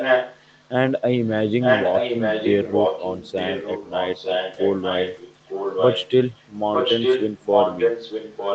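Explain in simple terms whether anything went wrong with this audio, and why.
A second copy of the speech trails about 0.9 s behind at 0 to 0.7 s, faintly near 1.2 s, then 1.47 to 6.12 s and 6.28 s onward. This is an echo leak, likely from a loudspeaker whose echo canceller let sound return.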